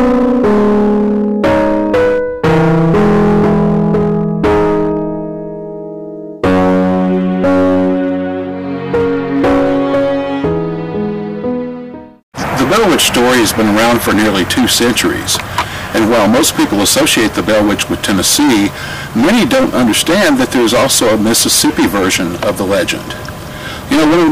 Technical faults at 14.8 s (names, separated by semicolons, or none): hard clipping